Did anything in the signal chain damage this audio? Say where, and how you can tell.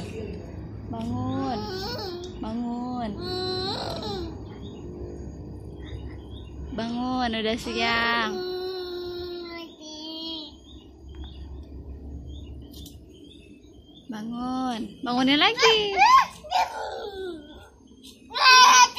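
No, nothing stood out on listening that would point to damage at any stage of the signal chain.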